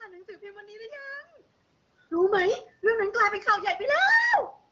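Nothing stood out as a technical fault when listening to this speech recording.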